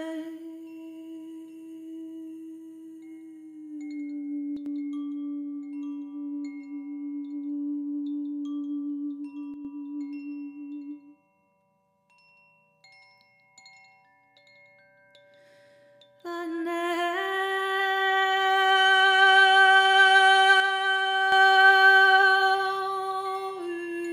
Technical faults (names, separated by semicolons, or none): one channel drops out